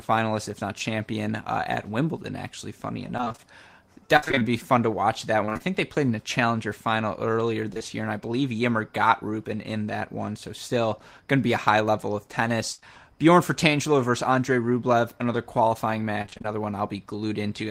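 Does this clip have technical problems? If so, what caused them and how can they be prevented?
Yes, the speech is damaged by packet loss in three forms.

Repeated packet loss (robotic sound) runs from 3.17 to 5.62 s, with sixteen gaps of up to 54 ms, and again from 16.22 to 16.46 s after "another qualifying", where concealment fills half the span. Each gap is patched by extending the previous sound, so the spectrogram shows repeated smeared, stretched harmonic blocks, and the speech turns choppy with pieces missing.

Short concealed packet loss occurs at 7.74–7.78 and 7.78–7.82 s, between "a challenger final earlier" and "year and I believe", and at 12.80–12.84 s. About 20 ms is synthesized each time, which shows as a brief smeared patch and is heard as a smear or wobble.

A burst of packet loss from 12.72 to 12.80 s, after "a high level of", removes about 60 ms. The waveform shows the last sound held and decaying, followed by a jump to later audio.

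A steadier network path, a larger adaptive jitter buffer and codec forward error correction or redundancy would prevent these losses.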